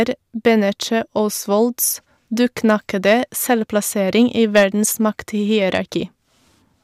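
Hard clipping hits the speech twice. From 4.20 to 4.64 s, peaks overshoot the level the chain can carry by about 7 dB. Their tops are sliced flat. That squaring adds harmonics high in the spectrum. The result is a harsh, gritty fuzz over the loud parts. A second, shorter overload follows at 5.75 to 5.77 s, about 4 dB over. It sounds like a brief crackle on the peaks.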